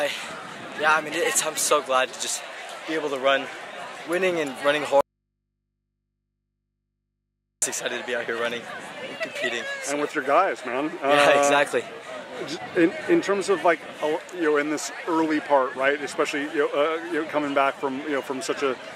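The wanted signal was most likely lost somewhere upstream while the rest of the chain stayed live, producing an audio dropout to a faint residue from 5.01 s to 7.62 s. For about 2.6 s the sound is cut off abruptly, mid-flow rather than at a natural pause, and the gap holds only a low mains hum sitting roughly 55 dB below the normal signal level. The sound then returns just as suddenly, with no fade either way.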